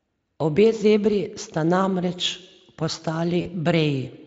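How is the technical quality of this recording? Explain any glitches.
One glitch stands out, near the end of the speech: VoIP packet loss concealed by the speech codec, from 3.41 to 3.48 s. About 40 ms of audio went missing, which fits two lost 20 ms frames. The decoder papered over the gap by extending its last pitch and vocal-tract filter at falling gain, so the voice smears into a brief buzzy tone or coloured noise that fades. Because each rebuilt frame feeds the next, the sound stays weak or distorted until about 3.48 s, past the point where the packets resume. What sets it apart from a plain dropout is that there is no silence or click. The gap is filled with a synthetic continuation of the voice. The Speex codec itself leaves at most faint coding traces.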